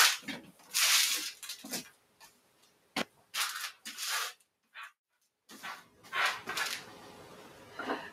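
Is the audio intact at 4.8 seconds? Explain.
No. Between 4.33 and 4.95 s the sound is cut by the noise suppressor: it treated this passage as noise and pulled it down by up to about 17 dB, so steady or decaying parts sink or end early while sharper onsets still get through.

This happens because a noise suppressor meant for speech stays on across the whole clip, where the noise suppressor applied to music or sounds treats held tones, ambience and tails as noise, producing level swings of around 20 dB and a pumping, thinned sound.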